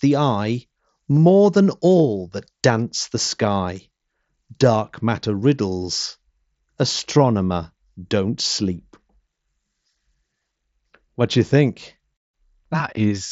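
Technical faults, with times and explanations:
1.16 s, 5.42 s and 12.96 s: concealed Bluetooth headset packet loss. Each is a 7.5 ms gap, which fits a single dropped mSBC frame, patched by repeating the best-matching bit of the preceding waveform, so it's just a tiny blip, the first right before "than all that dance".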